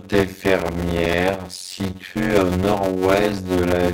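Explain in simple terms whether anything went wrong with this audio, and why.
Something did go wrong, all the way through: a block size mismatch (padded). Each chunk of speech, which fits 256-sample blocks, gets topped up with silence, so there's a buzz at about 92 Hz and everything plays at roughly half speed, 0.533 times normal, with the voice's character kept.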